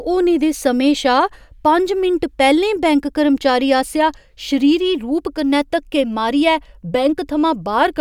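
No technical faults can be heard in the speech.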